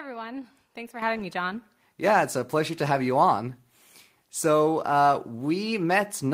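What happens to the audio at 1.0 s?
At 1.02 s the microphone volume is stepped up: the call software decided the input was too quiet and raised the device's level in a single jump of about 8 dB, so the voice and the background both get louder together right before "having me".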